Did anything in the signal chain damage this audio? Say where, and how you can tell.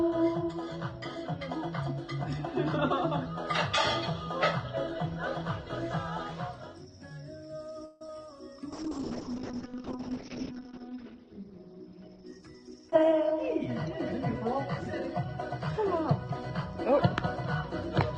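Yes, the network and call processing left their marks. From 7.85 to 8.02 s the sound stalls and is stretched into a fading buzz for about 154 ms, then resumes exactly where it stopped. That's a call audio freeze, likely packets held up and the jitter buffer running dry. Nothing is lost, but the playback delay grows by 154 ms.

Right after, at 8.07 to 8.09 s, there's a short concealed packet loss. About 10 ms of audio never arrived, and the decoder papered over it with 13 ms of extrapolated sound before blending back. You hear it as a small smear or wobble.

The big one is a call bitrate drop from 8.73 to 14.96 s. The encoder falls from 128 kbps to 9 kbps and the bandwidth closes from 20 kHz to 6 kHz, so the top end disappears and everything turns muffled and watery. It stays at the lowest rate for about 1.57 s.

Inside that stretch, from 11.92 to 13.67 s, a jitter buffer speed-up kicks in. 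The receiver trims pitch-period slices to drain excess buffered audio, about 150 ms in total. That runs the audio at 108% speed with the pitch unchanged, so it sounds hurried.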